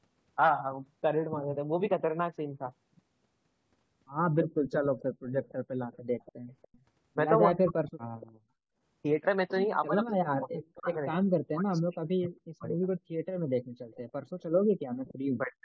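A far-end echo canceller likely let part of its loudspeaker pickup through, so echo leak appears from 4.66 to 5.53 s, 5.92 to 6.83 s, 7.89 to 8.31 s and briefly at 15.06 s. Each is a faint copy of the speech arriving 290 ms late, about 20 to 25 dB below the voice.

When both sides talked at once, the canceller likely could not tell its own talker from the echo and pulled both down, giving speech suppressed in double talk at 7.47 to 7.91 s, 9.87 to 12.83 s and 15.44 s to the end. The voice drops by roughly 40 dB in pieces, adding up to about two seconds in the middle stretch.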